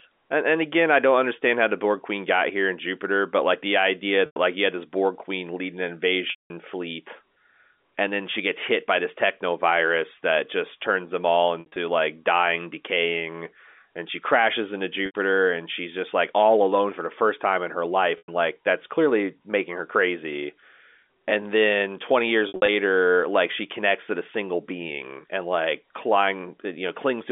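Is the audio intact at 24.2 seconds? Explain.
Yes, at 24.2 seconds the speech is intact, carried on a telephone-band line through G.711 coding that limits it to roughly 250 Hz to 3.5 kHz without any break in the audio at that point.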